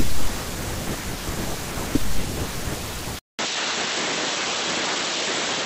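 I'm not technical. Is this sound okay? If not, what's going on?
No. At about 3.19 s there's a brief gap of about 0.2 s, and from then to the end the speech sounds duller and flatter, as if it lost its crisp top edge, with a faint new background noise underneath. The loudness stays about the same. Nothing above roughly 7.9 kHz comes through after that point. This is likely an input switched to a poorer device: the recording jumped mid-way to a different, lower-quality microphone.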